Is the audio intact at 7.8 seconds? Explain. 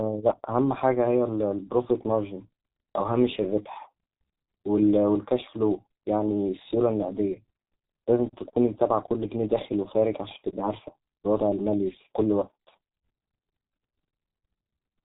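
No. At 7.8 seconds, as throughout the clip, the speech carries heavy G.723.1 codec damage. Nothing passes above 3.8 kHz, and the sound suggests a rate near 6 kbit/s, with a slowly updated voice model. Unlike a plain low-pass filter, it sounds hoarse as well as muffled, with blurred consonants.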